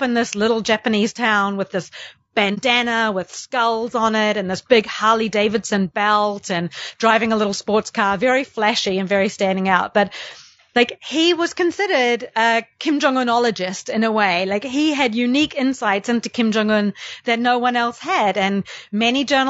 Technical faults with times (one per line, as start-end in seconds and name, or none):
0.00-19.50 low-delay AAC compression
2.54-2.58 AAC frame loss with muting